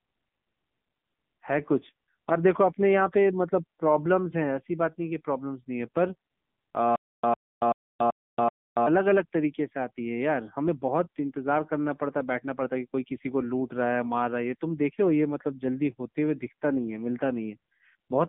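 Throughout, the speech carries an AMR narrowband mobile codec sound. The band runs from about 150 Hz to 3.6 kHz, with nothing above. The codec rebuilds speech from a vocal-tract model fed by a few pulses per short frame. Here the damage is plainly audible: a buzzy, synthetic edge on the voice. The coarseness points to one of the lower AMR-NB modes, around 8 kbps.

From 6.96 s to 8.87 s there is a stutter with silent gaps. A 102 ms fragment plays five times. Each burst is followed by about 280 ms of digital silence, so it returns every 382 ms at an even pace. The likely cause is a stalled stream that replays its last fragment at each retry, then runs dry. Whatever should have played in that span is lost.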